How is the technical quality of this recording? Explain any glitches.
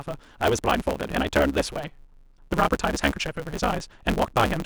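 The recording has a continuous fault that affects the whole clip.

A block size mismatch (truncated) runs throughout. One stage writes longer blocks than the next reads, so each block's tail is discarded. The speech plays about 1.6 times too fast with its timbre kept, with a buzz at 138 Hz, which fits 512-sample blocks being cut short.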